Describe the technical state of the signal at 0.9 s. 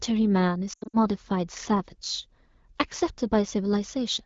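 At 0.9 s the speech is inside a burst of lost AMR speech frames, running from 0.73 to 0.97 s. Radio errors spoiled the frames, so the AMR-WB decoder, at 12.65 kbit/s, filled each gap by reusing the last good pitch and vocal tract settings at falling gain. About 160 ms is lost across 200 ms, with the longest run 80 ms. The sound warbles, then fades out quickly to near silence. It returns weak or rough.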